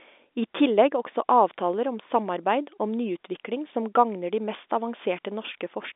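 No faults detected; the speech sits in an ordinary telephone band of roughly 250 Hz to 3.6 kHz, as expected from G.711 telephone coding.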